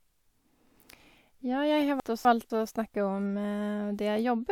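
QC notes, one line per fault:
2.0–2.5 s, chunks out of order: two 250 ms chunks play swapped, jumbling the speech; three hard joins.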